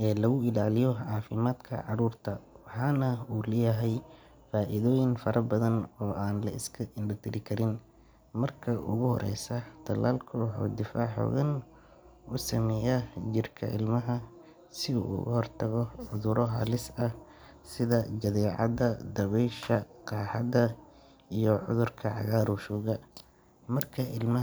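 Listening to the speech recording turned up nothing that stood out as a technical problem.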